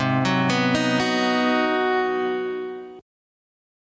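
Gain pumping runs through the whole clip. The level breathes. The swing is large, roughly 25 dB. Loud and soft parts sit too close in level, and everything sounds squashed. The likely cause is a microphone gain set far too high, with a fast limiter or compressor clamping down on every peak. The call microphone processing passes nothing above 8 kHz.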